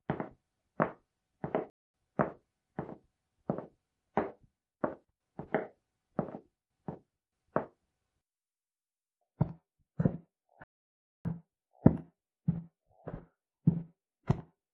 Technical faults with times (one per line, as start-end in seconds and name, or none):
1.70-1.94 playback stall
10.64-11.25 playback stall